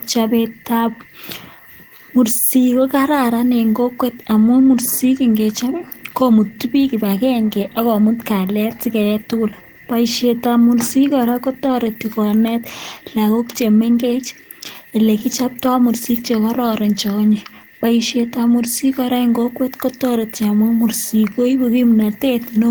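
From 14.73 to 15.72 s, between "konet lagok che mengech" and "mursik che kororon che", about five lost or late packets caused scattered short gaps, patched by extending the previous sound, heard as brief ticks and smears.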